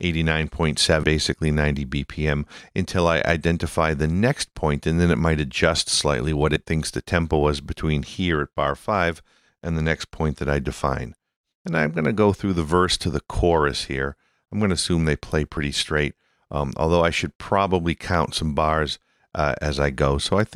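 Damaged data in a compressed stream at 1.02, 6.55, 10.82 and 15.56 s: the decoder misreads corrupted frames and loses sync, leaving a brief disruption in the sound each time.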